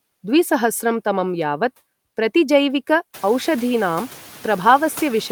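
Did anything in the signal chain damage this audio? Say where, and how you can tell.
Yes, in call processing. Noise suppressor artifacts run throughout: the background drops about 13 dB between phrases and rises under speech, including the room noise that steps up around 3 s.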